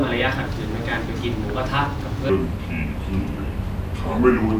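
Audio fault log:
2.30–4.59 s, section at the wrong speed: from 2.30 s to the end, the speech suddenly plays at 0.712 times its proper rate, so it turns deep and drawn out, dropping about five semitones. Unlike a pure pitch shift, where timing stays intact, here the syllables stretch in step with the lowered pitch, and the change switches on abruptly at one point. The likely cause is that segment being played back against the wrong clock.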